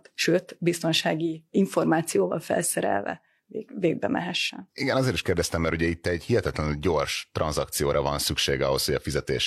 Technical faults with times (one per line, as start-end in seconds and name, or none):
none